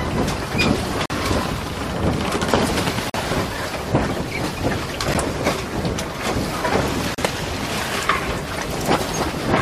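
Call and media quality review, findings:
Gap between stream segments: hard-edged silent holes at 1.06–1.10 s, 3.10–3.14 s, 5.14 s and 7.15–7.18 s (about 43, 44, 11, 34 ms), spaced about 2 s apart. This fits a timestamp gap at 2 s segment boundaries filled with silence. Unlike a dropout, the sound resumes without skipping any content.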